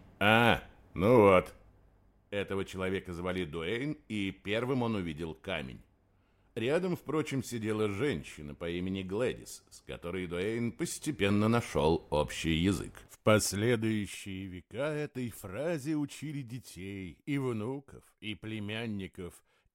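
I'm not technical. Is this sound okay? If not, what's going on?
No. Three times the volume slides, and while it does, a rapid ticking or zipping rides on top of the sound: from 1.24 to 2.28 s as it gets quieter, from 10.56 to 11.96 s as it gets louder, and from 13.2 to 14.48 s as it gets quieter again. This is zipper noise. Instead of gliding smoothly, the volume was changed in small separate jumps, roughly seven to ten each second, and every jump leaves a tiny click.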